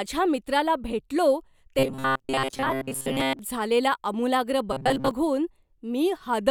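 Speech turns into a robotic sound from repeated short buffers from 1.79 to 3.39 s and again from 4.73 to 5.11 s: a rigid, metallic buzz locked at 133 Hz that loosely tracks the speech. The likely cause is playback starved of data, looping roughly 7.5 ms chunks while most of the real audio is skipped. Unlike pitch-shifting or comb filtering, the buzz stays fixed at 133 Hz instead of following the speaker's intonation.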